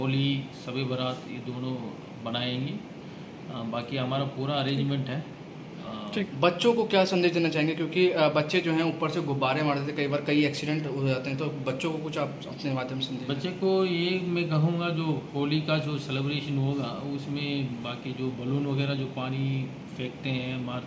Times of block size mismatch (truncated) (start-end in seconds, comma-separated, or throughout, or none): none